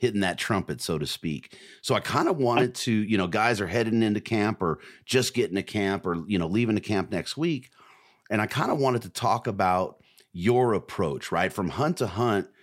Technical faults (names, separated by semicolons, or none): none